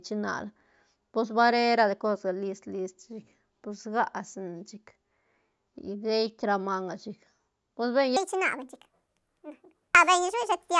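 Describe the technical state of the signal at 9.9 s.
Wrong sample rate, from 8.17 s to the end of the clip, covers the moment at 9.9 s. The samples are being played back faster than they were captured, with no rate conversion, which fits audio recorded at 16 kHz and played back at 24 kHz. Speed and pitch rise together by a factor of 1.5, so the speech is about 7 semitones higher and sounds high, thin and hurried, running half again as fast as normal.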